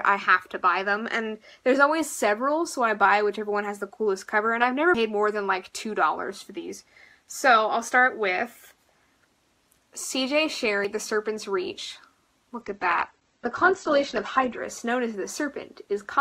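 At 4.95 s the sound skips. About a tenth of a second seems to vanish, and the two sides butt together with no silence between them. The same jump returns at 10.85 s, roughly six seconds later. This is likely audio missing between chunks. The recorder or processor appears to work in six-second blocks and drops a sliver each time it closes one block and opens the next.

From 12.61 s to 14.61 s the quality falls suddenly. Nothing is left above 8.3 kHz, so the top end goes dull and compressed artefacts grow. There is no gap at either edge. This is an adaptive stream at a lower bitrate. The connection seems to have slowed, and the player switched to a leaner version for two seconds. The sound points to a drop from around 64 kbit/s Opus to about 12 kbit/s.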